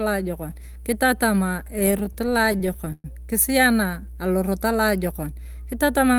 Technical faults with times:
0.00-6.18 mains hum
1.79-3.06 repeated stalls (stutter)

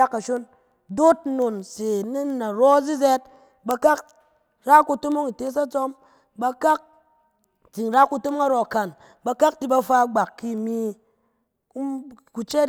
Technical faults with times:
0.19-12.69 word clock ticks

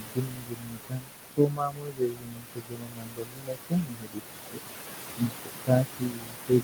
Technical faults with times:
0.00-6.64 noise suppressor artifacts
0.00-4.62 speech cut by the noise suppressor
5.17-6.64 speech cut by the noise suppressor

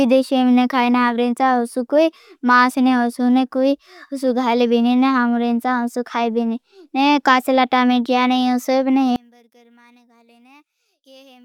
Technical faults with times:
9.16-11.45 one channel inverted

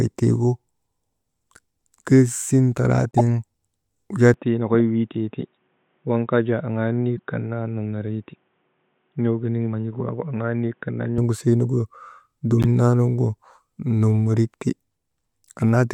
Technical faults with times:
3.11-3.21 corrupt frame decoded
4.34-11.18 input switched to a poorer device
7.17-7.20 corrupt frame decoded
12.61-12.67 corrupt frame decoded

